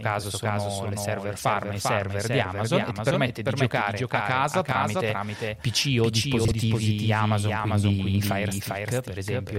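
Throughout the clip runs a doubled audio track: a second full-band copy of the speech trails the original by roughly 0.4 s at about 5 dB lower, dry and uncoloured. It is likely a second capture through a slower path, or an edit holding two misaligned copies.

From 6.45 to 6.52 s, frames are out of order. Two adjacent 32 ms blocks were decoded in swapped sequence, so this short stretch plays with its halves exchanged, giving a brief garbled flutter. No time is lost.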